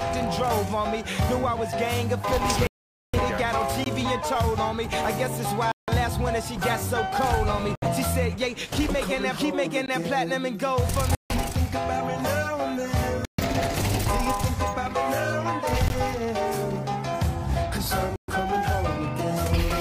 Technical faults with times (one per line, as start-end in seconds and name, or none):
2.67-3.15 Bluetooth stall
3.84-3.86 gap between chunks
5.72-5.89 Bluetooth stall
7.75-7.88 Bluetooth stall
9.86-9.88 gap between chunks
11.15-11.31 Bluetooth stall
13.25-13.40 Bluetooth stall
15.88 gap between chunks
18.16-18.30 Bluetooth stall